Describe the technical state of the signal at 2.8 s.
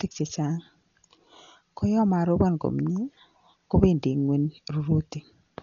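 At 2.8 s the speech carries heavy damage of the kind left by Dolby Digital compression, present across the whole clip rather than just at this moment. It is likely caused by an AC-3 style encoder starved of bits, which fits a rate near 40 kbps. The coder has cut the band so that nothing remains above 7 kHz, and it has left many frequency lines without mantissa bits, so the decoder fills them with dither noise. The result sounds dull and muffled, with a rough, fluttering hiss clinging to voiced tones. A spectrogram would show a hard ceiling at 7 kHz with empty black above it, and grainy, speckled patches between the harmonics instead of clean gaps. The waveform looks ordinary, since the damage is spectral.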